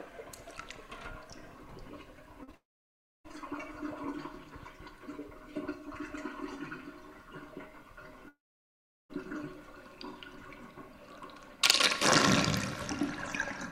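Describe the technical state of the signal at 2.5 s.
At 2.5 s the signal sits inside a cluster of short concealed packet loss: about 40 ms missing from 2.43 to 2.49 s, then about 20 ms missing from 2.51 to 2.55 s. Each time, audio failed to reach the decoder in time. The receiver patched the hole by extending the preceding sound and then blended back into the real signal, so each gap comes across as a brief smear or wobble. The real audio returns right after the first patch, which sets it apart from a dropout.

The second gap runs straight into a stretch of roughly 0.7 s, from 2.55 to 3.26 s, where no real audio is heard. It behaves like a long network dropout, the likely cause. The extended sound fades within the first few hundredths of a second, and about 0.64 s of silence follows. When the audio resumes at 3.26 s, the lost part is simply skipped rather than patched over.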